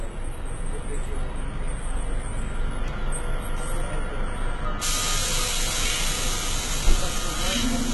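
From start to finish the treble has that synthetic, copied-up quality, and it sounds like HE-AAC compression, likely heavily squeezed at a rate that fits something around 16 kbps. The top end is bright but not real: bands seem lifted from lower down and painted over with a rough envelope, so harmonics don't line up across the crossover. Transients and hissy detail come out gritty and metallic, and there's nothing at all above about 11.8 kHz.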